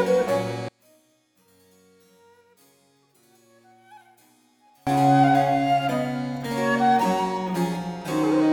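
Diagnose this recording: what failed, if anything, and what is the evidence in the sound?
Analogue wiring stage: from 0.69 to 4.87 s the mono level falls by about 35 dB, likely one channel inverted, so shared content cancels and leaves a faint residue.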